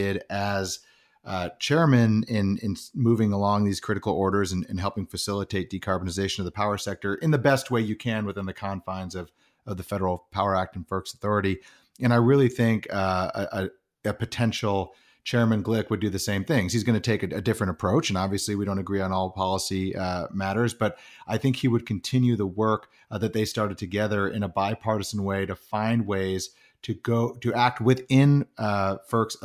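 Nothing in the speech here trips any alarms, with no technical faults to point to anywhere along the way.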